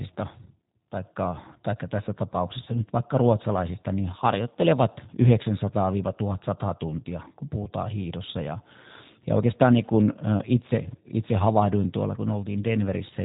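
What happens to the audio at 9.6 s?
At 9.6 s the speech carries G.729 codec damage, present throughout the clip. The codec rebuilds each 10 ms frame from a vocal-tract filter, pitch predictor and sparse pulses, so the voice sounds rough and synthetic, with nothing above 3.8 kHz, consistent with 8 kbit/s coding.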